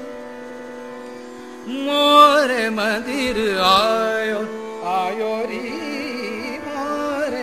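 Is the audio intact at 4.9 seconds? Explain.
Yes, at 4.9 seconds the audio plays through cleanly, with no dropout, click, distortion or other fault to be heard at that point.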